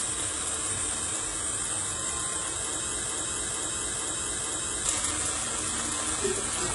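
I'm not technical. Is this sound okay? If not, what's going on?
No. Two problems are audible.

Across the whole clip, the high end sounds gritty and metallic. Hissy or crisp parts of the sound come out rough and lispy, and nothing at all is present above about 11 kHz. This is the signature of HE-AAC compression, likely squeezed very hard. That kind of encoder keeps only the lower part of the sound and fakes the treble by copying lower parts upward, so the brightness you hear isn't the real detail.

From 3.06 to 4.85 seconds, the sound gets stuck. A piece just under half a second long plays, then plays again, back to back, four times over, exactly the same each time, like a broken-record loop. This likely happened because the player or stream stalled and kept resending the last bit of audio it had. Whatever should have played during those seconds is missing.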